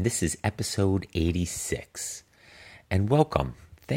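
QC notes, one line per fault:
No faults found on this speech clip; nothing to log.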